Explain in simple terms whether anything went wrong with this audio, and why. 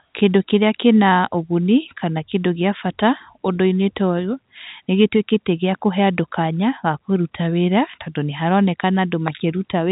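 Nothing went wrong; this is ordinary phone-line speech.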